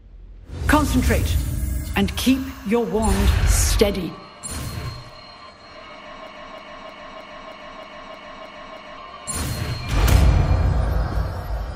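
From 6.27 to 8.98 s a broken-record loop replays one identical 0.31 s fragment nine times, likely a stalled stream; unlike a stutter, nothing new gets through.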